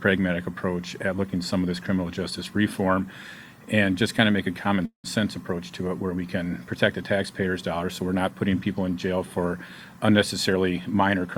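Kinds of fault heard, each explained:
Call audio freeze: at 4.85 s the sound stops moving forward for about 0.2 s. The last moment is carried on briefly as a fading buzz, then about 110 ms of silence, and the audio resumes where it left off. Here it is likely caused by packets stalling and the jitter buffer running dry. Unlike a dropout, nothing is lost. A 184 ms gap is inserted, so everything after it arrives later.
Jitter buffer speed-up: from 10.50 s to 11.28 s the sound runs at about 117% speed with its pitch unchanged, and roughly 150 ms in total is trimmed out. The receiver cuts many short pitch-period slices in a row to drain an overfull buffer and reduce delay. It is heard as hurrying rather than a jump or a gap. That separates it from a freeze, which adds time, and from a simple resampling speed change, which would raise the pitch.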